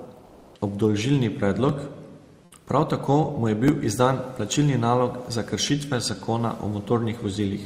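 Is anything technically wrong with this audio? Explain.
Yes. From 0.25 to 0.55 s, about 300 ms, the background is replaced by comfort noise: the room noise, sitting about 39 dB below the speech, gives way to a steady, featureless hiss, shifted by about 2 dB, before the real background returns. The likely cause is discontinuous transmission, consistent with Opus DTX, where the sender pauses during non-speech and the receiver synthesises shaped noise. Unlike a dropout or noise gate, the floor never falls to silence; its texture flattens.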